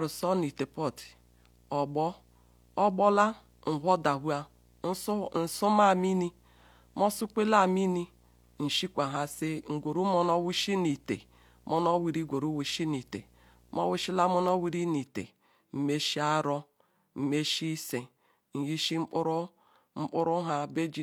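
This speech clip has video or display buzz from the start to 14.72 s: a 60 Hz buzz with a gritty hash riding above it, sitting roughly 35 dB under the speech. That's a screen or video cable coupling its field-rate interference straight into the audio path.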